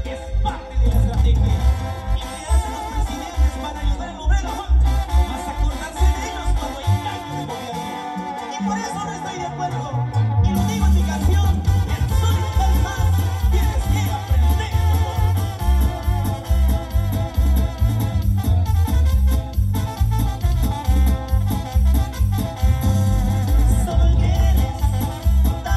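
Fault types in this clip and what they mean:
No technical faults can be heard anywhere in the audio.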